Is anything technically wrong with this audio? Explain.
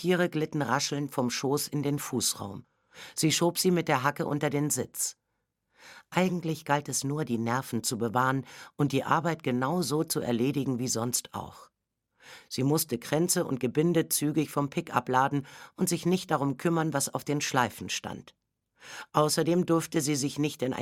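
No, nothing technically wrong turns up here; it all comes across without a hitch.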